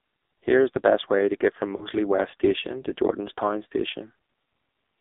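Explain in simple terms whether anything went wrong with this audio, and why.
The speech went through the AMR narrowband mobile codec, the old phone-network voice coder. It cuts everything above about 3.7 kHz and, at this low quality, sounds heavily buzzy and synthetic.

From 1.76 to 1.88 s there are lost AMR speech frames. Missing data made the decoder stretch the previous sound and fade it briefly, which fits two lost frames.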